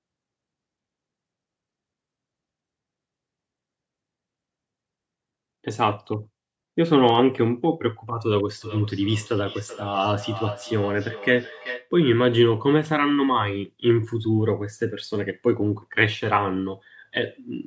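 From 8.61 to 11.91 s, feedback echo between two devices repeats speech about every 0.4 s at about -15 dB, showing as faint, evenly spaced spectrogram copies.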